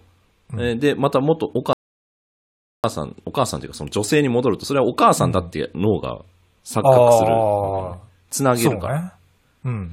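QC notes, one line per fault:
1.73–2.84 s, rebuffering stall: the speech cuts to silence for about 1.11 s and then picks up exactly where it broke off. No sound is skipped or repeated. The player ran out of downloaded audio and had to wait for more to arrive. Playback simply paused during that wait. So the gap adds time to the clip rather than removing any of it. The silence is clean, with an abrupt stop.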